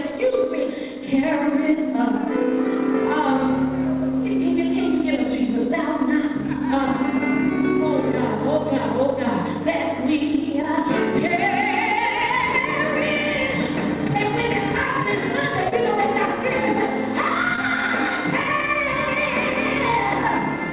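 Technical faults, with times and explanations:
10.62–10.65, 15.69–15.74 and 17.56–17.59 s: short concealed packet loss. Each time, about 20 ms of audio arrived too late, which fits one lost packet. The receiver stretched the preceding sound to cover the hole, then blended back, so each spot sounds like a brief smear or wobble.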